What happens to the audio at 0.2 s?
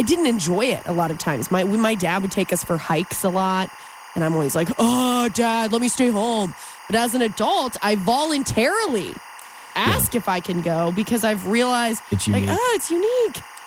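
At 0.2 s the speech already carries timecode bleed, which runs for the whole clip rather than starting at that moment. A linear timecode signal from an adjacent track or cable has leaked into the audio path. Its square wave flips between tones near 1 kHz and 2 kHz, and the frame pattern cycles at 24 frames per second. Sitting roughly 20 dB below the speech, it comes across as a continuous chirping warble behind the voice.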